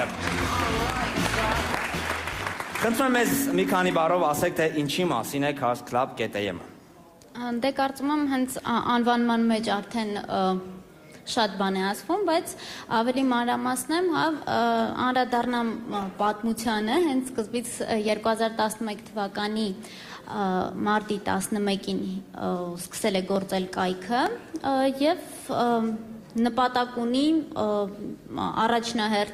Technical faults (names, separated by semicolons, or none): dropped samples; call bitrate drop